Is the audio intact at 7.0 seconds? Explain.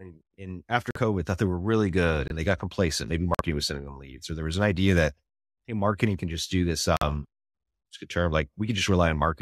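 No. Right after "can just do this", a corrupt frame muted fault cuts the speech from 6.97 to 7.03 s. Flipped bits made the decoder reject the compressed data, roughly two codec frames' worth, and the player filled the gap with silence. The result is an abrupt hole with no shift in timing.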